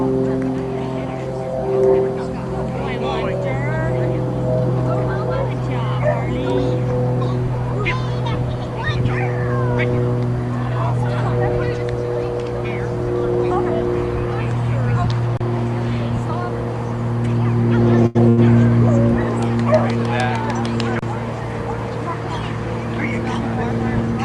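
At 18.06 and again at 18.29 s, a short stall from a late packet holds the sound for about 86 ms with a faint buzz or dip. A packet arrived late, the jitter buffer emptied, and the last sound was stretched. Unlike a dropout, nothing is skipped, and playback resumes exactly where it paused.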